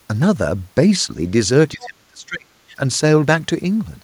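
Speech, and between 1.73 and 2.48 s the echo canceller likely misjudged a moment of double talk, treating the near talker as loudspeaker echo and clamping down on everything. The result is speech suppressed in double talk: the voice sinks by as much as 35 dB at its deepest for roughly 0.7 s in total before recovering. Within that same window, from 1.82 to 1.86 s, the canceller likely failed to subtract all of the loudspeaker signal from the microphone, so the other side's voice leaks through as a brief scrap sitting around 20 dB below the main speech. It surfaces just as the near talker is being pushed down.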